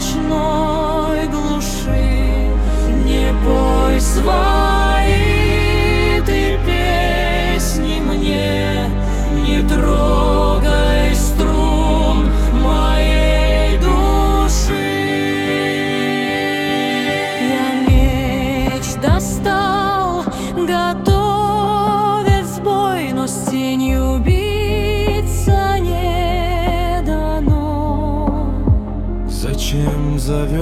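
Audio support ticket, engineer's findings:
No audible faults found.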